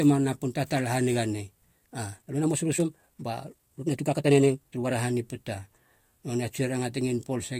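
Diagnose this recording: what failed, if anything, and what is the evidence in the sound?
Right after "napun tatala haniga nei", from 1.84 s to 4.92 s, the speech abruptly turns rushed, running about 1.52 times faster while its pitch stays put, then returns to normal pace. That is a time-stretched section, likely introduced at a software processing stage after capture, where the audio was squeezed to fit a shorter length. To keep the pitch constant, the stretching dropped short slices of the waveform, which produces the hurried texture heard across those three seconds.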